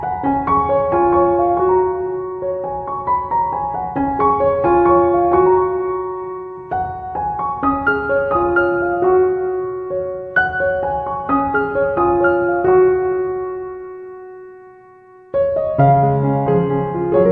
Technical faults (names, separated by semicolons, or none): none